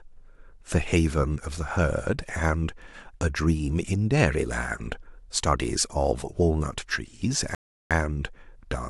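At 7.55 s the player runs out of downloaded audio, a rebuffering stall: speech cuts to silence for 0.36 s, then resumes where it stopped.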